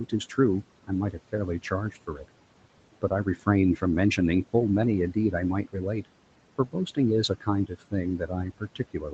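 Noise suppressor artifacts run through the whole clip: the steady background is pulled down by about 18 dB between phrases and resurfaces under the speech. On a spectrogram the noise floor pumps, darkening in gaps and speckling beside voiced energy.

Speech cut by the noise suppressor comes at 0.87 to 2.29 s (drops of about 16 dB, a few brief moments totalling roughly a third of a second), 3.02 to 3.82 s (about 13 dB, short), 5.64 to 6.06 s (about 16 dB, very brief) and from 7.29 s to the end (about 17 dB). Quiet consonants and endings are treated as noise and sound swallowed, appearing as sudden notches in the waveform envelope and missing high-frequency wisps on the spectrogram.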